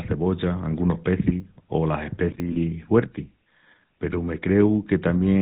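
Throughout the speech, the band stops near 4 kHz and carries the buzzy, gravelly roughness of the GSM full-rate codec, consistent with its 13 kbps coding. The vocal tract is modelled and excited by sparse regular pulses, so fine detail is lost and the damage is plainly audible.

At 1.4 s and again at 2.4 s there is an abrupt forward jump in the sound and no gap of silence. This is likely a dropped buffer (overrun): samples were overwritten before being read, and a few tens of milliseconds vanished, with the two sides spliced directly.

From 2.52 to 2.57 s the sound freezes into a rough, metallic ring. These are lost GSM frames: the decoder repeated the last good frame's settings over about 40 ms, which fits two missing frames, instead of producing new signal.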